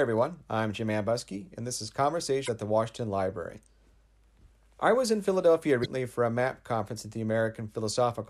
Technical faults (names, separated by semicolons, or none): damaged data in a compressed stream